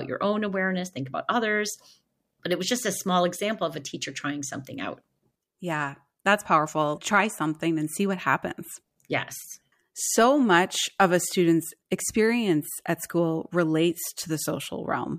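Nothing in this speech recording stands out as a technical problem; there's nothing in it to flag.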